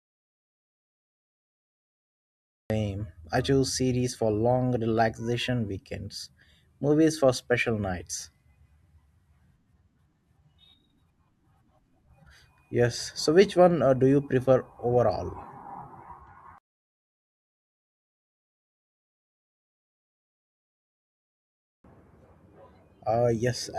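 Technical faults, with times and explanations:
0.00–2.70 s: audio dropout to silence. The clip opens in silence with no room tone. The speech then cuts in mid-flow. The input was likely lost while recording continued writing silence.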